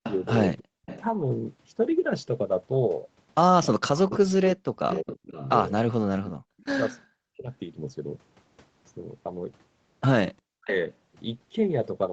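Echo leak, from 0.03 to 1.03 s: a delayed copy of the speech trails the talker by 337 ms, sitting about 15 dB under the direct voice. This is likely a far end on loudspeaker whose echo canceller let part of its microphone pickup through and sent it back. The same ghosting returns from 4.09 to 6.65 s at a 366 ms lag, and as a brief, fainter scrap at 10.69 to 10.75 s, 399 ms behind and about 25 dB down.

Speech suppressed in double talk, from 0.59 to 0.72 s: the talker's voice drops sharply, by roughly 40 dB, for about 150 ms. This is likely an echo canceller that, with both sides active, could not tell its own talker from loudspeaker echo and turned everything down. It recurs from 3.74 to 5.34 s, where about 1.5 s of speech is chopped, then from 7.06 to 7.5 s and at 10.58 to 10.72 s as shorter dips.

Background gated by the echo canceller, from 6.31 to 6.58 s: the room sound falls away by about 30 dB for roughly 300 ms, then comes back. 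While the loudspeaker was playing, the canceller clamped the microphone hard. Because this happens inside the echo leak that runs to 6.65 s, the ambience briefly empties out beneath the lagging echo and returns once the canceller releases.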